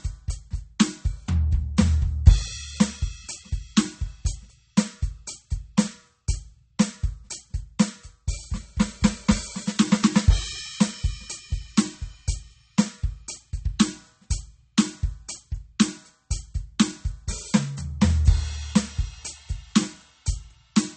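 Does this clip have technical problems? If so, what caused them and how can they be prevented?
Yes. Throughout the music, the treble stops dead at 8.4 kHz and the sound turns watery and swirly, with smeared attacks. The likely cause is MP3 compression at a bitrate that fits around 32 kbps. With so few bits, the encoder cuts the highs and lets weak detail flicker from frame to frame. Encoding at a much higher bitrate prevents this.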